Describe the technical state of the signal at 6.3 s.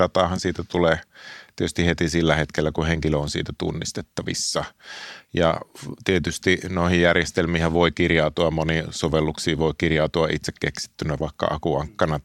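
At 6.3 s the speech signal is intact, with no audible fault at that moment.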